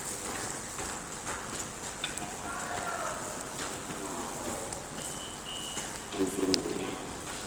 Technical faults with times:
0.00-7.47 Opus compression
0.00-7.47 block size mismatch (padded)

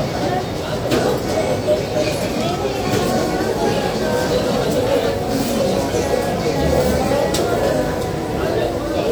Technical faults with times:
none

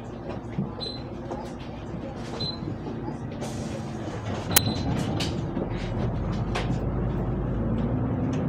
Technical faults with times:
4.56 file tags played as audio

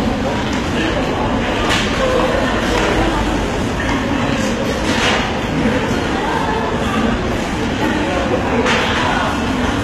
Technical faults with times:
0.00-9.83 HE-AAC compression

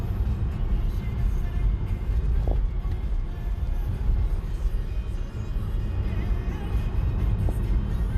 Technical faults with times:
0.00-8.17 MP2 compression
2.42-2.53 DAB burbling
7.49 DAB burbling

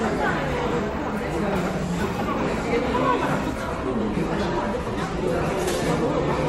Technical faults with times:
3.71-6.49 adaptive stream at a lower bitrate

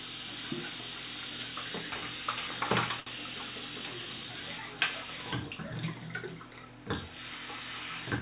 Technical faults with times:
3.00-3.09 short stall from a late packet

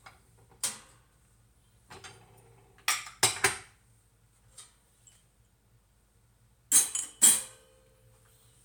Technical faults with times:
0.96-8.49 clock drift buffer slips

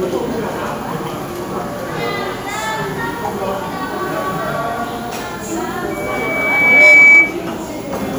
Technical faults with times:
5.90-7.37 loudspeaker feedback squeal

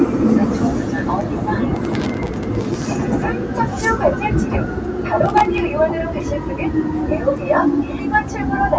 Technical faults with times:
0.00-8.78 noise suppressor applied to music or sounds
1.76-3.01 processor overload crackle
5.26-5.58 processor overload crackle

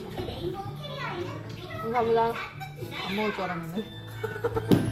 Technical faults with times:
none

